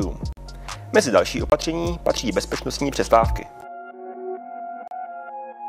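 Blocks of digital silence at 0.33–0.37 s, 1.50–1.52 s, 3.61 s and 4.88–4.91 s: output buffers likely went unfilled, zeroing roughly 46, 23, 12 and 35 ms, the longer ones heard as abrupt dropouts and the 12 ms one as a tick.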